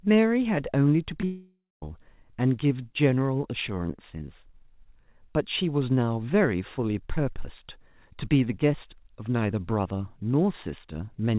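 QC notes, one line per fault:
1.21–1.24 s, short concealed packet loss: about 20 ms missing, patched by extending the preceding sound, heard as a brief smear.
1.25–1.83 s, long network dropout, likely: concealment buzz or hiss fades into roughly 220 ms of near-silence, leaving a flat waveform gap before audio resumes, the lost portion gone, band-limited to 4 kHz throughout.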